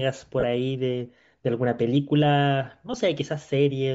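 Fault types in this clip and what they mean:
Bluetooth LC3 compression: Throughout the speech there is a plainly audible grainy, breathy edge, most likely from LC3, the transform codec of Bluetooth LE Audio. The damage is consistent with a bitrate around 32 kbps and 10 ms frames. At that rate the encoder discards much of the upper spectrum and substitutes synthetic noise there, so the top of the sound becomes a hissy texture rather than true detail.
Lost LE Audio frames: From 0.40 to 0.43 s, and again briefly at 2.93 s, the audio turns into a short noisy smear. The first gap spans 30 ms, which fits three 10 ms frames, and the second spans 10 ms, one frame. With no data arriving, the LC3 decoder repeated the last good spectrum with randomised signs. That keeps the overall energy but scrambles the detail, which is why the sound smears instead of cutting out.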